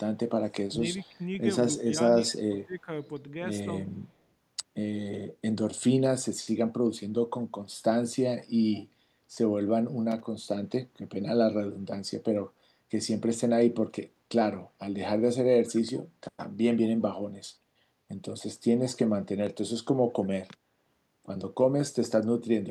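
Speech recorded over a call, with trouble in the first three seconds and one later burst of noise. From 0.68 to 1.2 s, and again from 1.72 to 2.89 s, the voice dips in pieces. The level falls by roughly 20 dB at its deepest, over about 300 ms and then about 500 ms in total. This is likely speech suppressed in double talk. Both ends spoke at once, and the echo canceller could not tell this talker from the loudspeaker echo, so it turned everything down.

Inside those dips, brief ghost copies of the voice appear. The first runs from 0.97 to 1.02 s, the second from 2.27 to 2.37 s. Each trails the original by 180 ms. They sit well below the speech, at about 30 dB down and then about 25 dB down. This points to an echo leak. The far end likely plays the call on a loudspeaker, and its canceller let part of the microphone pickup return.

At 10.11 to 10.20 s there is a short, irregular burst of scratchy crackle lasting about 90 ms. 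This is loose connector crackle. A worn or dirty contact made and broke rapidly as it moved, chopping the signal into rough fragments.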